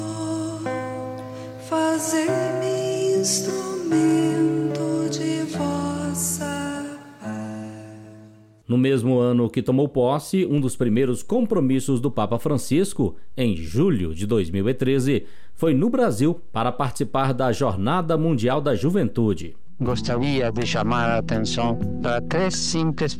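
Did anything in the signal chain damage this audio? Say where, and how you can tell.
Yes. A DC step at 10.58 s points to the converter or analogue input. The zero line jumps by about -30 dBFS, which is heard as one low thump, and the offset holds to the end. Unlike a dropout or splice click, the sound carries on unchanged across it, because only the baseline moved.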